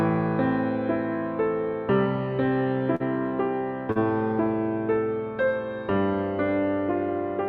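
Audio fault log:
2.95–3.03 s and 3.92–3.98 s: short concealed packet loss, twice. Each time roughly 40 ms of audio failed to reach the decoder in time, and the receiver filled the hole with about 43 ms and 36 ms of synthesized continuation. Voiced parts are extended from their last pitch and unvoiced parts from shaped noise before blending back into the real signal. This produces a brief smear or wobble.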